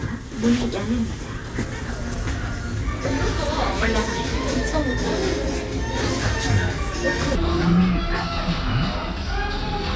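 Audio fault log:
7.35–9.96 s, wrong sample rate: from here to the end the audio drags and drops, running at about 0.73 times speed and roughly 5.5 semitones lower. Speed and pitch fall together with no conversion, which fits material captured at 22 kHz being played back at 16 kHz.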